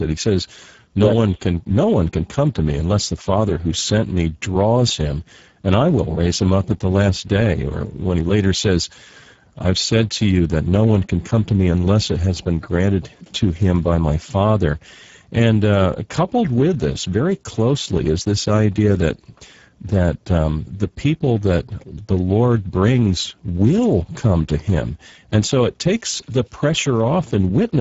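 From start to finish, the speech carries plainly audible Speex codec damage. The sound points to a low setting, around 10 kbps. At that rate the CELP coder has very few bits for the excitation signal. Voices come out noisy and hoarse. Nothing reaches above about 7.7 kHz. The top band sounds thin and hissy rather than detailed. The damage holds steady across the whole clip.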